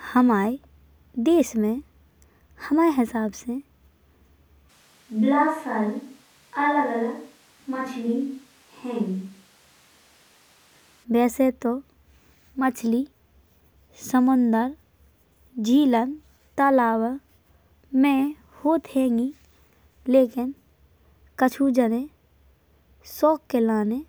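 A speech recording in which, from 4.71 s to 11.03 s, the voice abruptly turns roomy and hollow, loses its low end, drops by about 5 dB, and sits over more audible background noise, roughly 35 dB below the speech. It snaps back just as suddenly at 11.03 s. The likely cause is a switch to a distant microphone: the close microphone's feed dropped out or was left out, so that stretch comes from a microphone further away that captures more room reflection and ambient noise.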